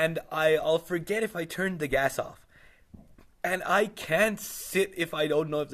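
No technical faults are audible in this speech.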